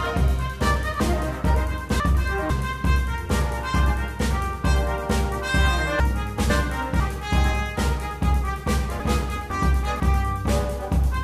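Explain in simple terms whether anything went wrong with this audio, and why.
Three brief jumbled moments, at 1.0–2.5 s, 6.0–7.0 s and 9.0–10.0 s, come from chunks out of order: a half-second piece of audio arrived late and played after the pieces meant to follow it, two pieces late the first time, one the others.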